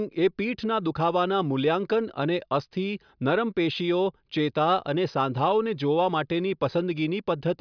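No technical faults are audible anywhere in the speech.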